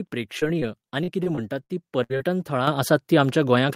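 From 0.39 to 2.22 s, repeated packet loss gives a choppy, robotic sound. Ten gaps, the longest 62 ms and about 300 ms in total, are patched by stretching the preceding sound. On a spectrogram these show as short frozen, flat-harmonic slices recurring through the stretch.

Microphone volume stepped up twice, first at 2.67 s by about 8 dB and again at 3.69 s by about 5 dB. Each time the input gain rose in one jump, so sound and background grow louder together, seen as an abrupt step in the waveform envelope.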